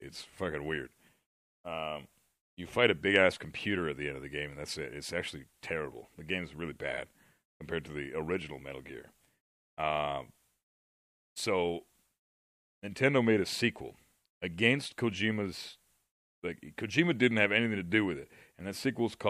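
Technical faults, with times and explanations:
No technical faults detected at any point in the clip.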